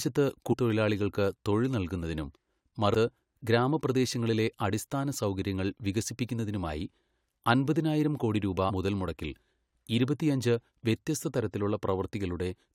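Brief smeared blips where the speech lurches forward occur at 0.52 s before "തൊഴിലാളികൾക്ക് തൊഴിൽ നല്കുന്നതിനും", at 2.93 s before "ഗ്രാമപ്രദേശങ്ങളിലെ അടിസ്ഥാന സൗകര്യങ്ങൾ വികസിപ്പിക്കുന്നതിനുമായി", and at 8.69 s after "അൻപതിനായിരം കോടി രൂപാ". These are compressed frames skipped. Runs of 21.3 ms frames were never played, dropping around 300 ms, 300 ms and 150 ms of audio.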